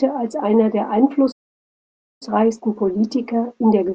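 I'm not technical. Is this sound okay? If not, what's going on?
No. The speech cuts out partway through. At 1.31 seconds the sound stops dead, and there is silence until 2.23 seconds. That gap lasts about 0.9 seconds. Then the speech picks up again. This is a playback stall. The player most likely ran short of audio data, or got held up doing something else. It had nothing to play, so it went quiet until it caught up.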